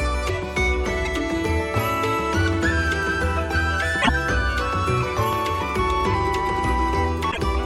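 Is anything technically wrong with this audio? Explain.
Yes. Loud pops occur at 1.78 to 1.80 s and 5.33 to 5.35 s, each a single sharp transient standing roughly 10 dB above the surrounding sound, which carries on beneath it. A sudden voltage step, likely from a plug, switch or static discharge, was added to the signal.

Damaged data in the compressed stream shows up at 3.99 to 4.10 s and 7.28 to 7.38 s. Corrupted bytes made the decoder misread frames and lose sync while it hunted for the next header, producing a brief chirp or blip.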